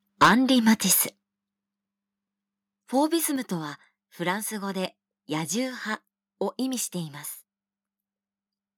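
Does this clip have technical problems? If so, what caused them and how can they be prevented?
Yes. Microphone overload is heard from 0.22 to 0.33 s, where the peaks sit about 12 dB beyond full scale and a large share of the waveform is flattened, giving a harsh crackle. A milder stretch follows from 0.67 to 0.93 s, about 3 dB over, with only a small fraction clipped. The likely cause is an input level set too high, so the converter runs out of headroom. On a waveform the tops appear squared off, and a spectrogram shows vertical smears of added high-frequency energy. Setting the input gain so the loudest peaks stay well below full scale prevents it.

Microphone volume stepped down three times: at 0.23 s by about 4 dB, at 1.23 s by about 7 dB, and at 3.36 s by about 4 dB. Each time the sound and its background fall abruptly together. This is likely the call software's automatic gain control reacting to a loud or clipping input by cutting the device's input volume in single steps. 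The waveform envelope shows sudden stair-step drops, and the spectrogram darkens evenly across all frequencies at those instants. Disabling automatic microphone adjustment and fixing a sensible level beforehand prevents it.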